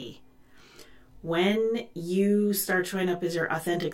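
Speech with channel delay (comb filtering) throughout: one channel trails by roughly 20 ms, so the mono sum cancels at evenly spaced notches from around 30 Hz, sounding rough and slightly doubled.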